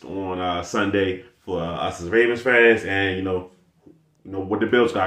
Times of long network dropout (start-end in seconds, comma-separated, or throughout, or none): none